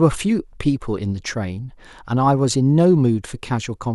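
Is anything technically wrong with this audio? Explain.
No, nothing is technically wrong with this audio.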